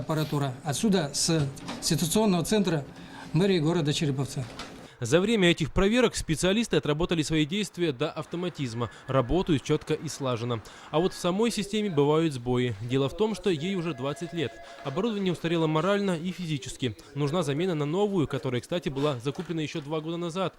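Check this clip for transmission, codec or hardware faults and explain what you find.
No faults turn up in this clip, so there is nothing to explain.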